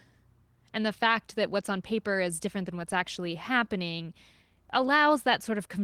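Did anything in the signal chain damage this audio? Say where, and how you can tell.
No, nothing in this speech recording points to damage at any stage of the chain.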